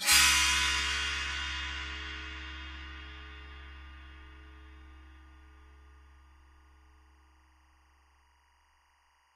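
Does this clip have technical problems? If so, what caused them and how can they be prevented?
Yes. Timecode bleed runs from 1.85 s to the end: 23.976 fps linear timecode leaks in, its square wave chirping between about 1 and 2 kHz, about 35 dB below the sound. A spectrogram shows two steady bands. Prevent it with shielded timecode cabling kept apart from audio lines.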